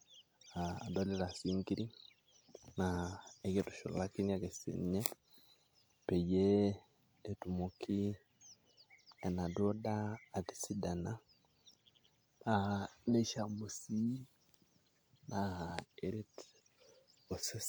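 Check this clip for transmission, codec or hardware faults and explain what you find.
There's one codec fault in this speech clip: a pre-echo at about 5.00 to 5.06 s, just after "kitushulakini ake siinye". A sharp onset lands late in a transform block, and the codec spreads the quantisation noise meant for that loud moment across the whole block, including the quiet stretch before it. You hear a brief hiss, roughly 53 ms long, creeping in ahead of the attack, which then comes across softened and a bit smeared rather than crisp.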